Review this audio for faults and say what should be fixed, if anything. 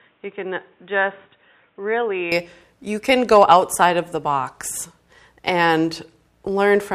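From 0.0 to 2.32 s the speech is band-limited, with nothing above 3.8 kHz. It sits around 5 dB lower and carries a faint noise floor of its own, roughly 40 dB under the speech. At 2.32 s full bandwidth returns with no gap, so the dull, boxy opening changes abruptly into the clearer remainder. This is likely an input switched to a poorer device, such as a fallback microphone or a headset call profile, before the intended input took over. Lock the recording to one input device, and start capturing only after that device is active.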